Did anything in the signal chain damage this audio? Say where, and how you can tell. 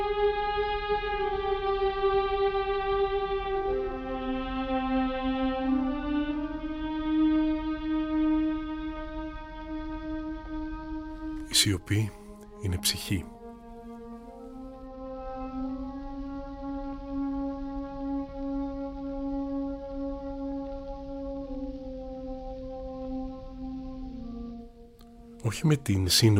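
No, nothing in the signal chain left an audible mark: there are no gaps, discontinuities or spectral damage anywhere in the recording.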